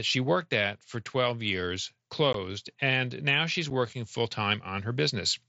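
At 2.33 s, just before "and now she's working", the speech drops out for about 15 ms with abrupt edges, and at 3.70 s, between "and now she's" and "working full", a shorter 7.5 ms hole appears. This is unconcealed Bluetooth headset packet loss: voice packets between headset and phone went missing and nothing filled the gap. The lengths fit two 7.5 ms mSBC frames and then one, carried on a wideband mSBC link.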